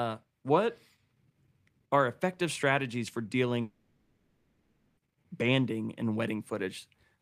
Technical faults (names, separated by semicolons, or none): long network dropout